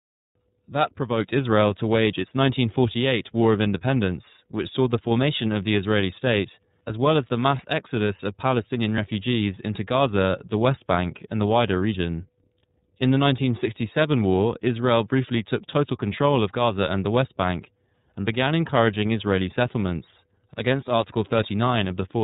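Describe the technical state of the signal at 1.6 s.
iLBC codec coding is present at 1.6 s, as it is across the entire clip. The codec packs the speech into short frames, here consistent with 30 ms blocks and a rate near 13.33 kbps, coding each frame's excitation independently of the one before. Everything above 4 kHz is gone, so the speech sounds narrowband and muffled at the top, with a plainly audible rough, synthetic grain laid over it.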